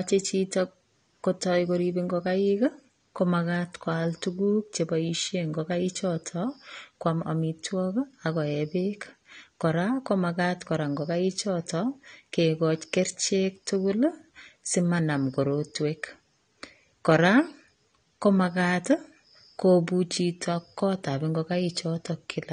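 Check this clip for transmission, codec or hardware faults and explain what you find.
One codec fault runs through the whole clip. The speech sounds dull and smeared, with fizzy sibilants and nothing above 9.7 kHz: likely AAC compression, coarse quantisation fitting roughly 32 kbps AAC-LC.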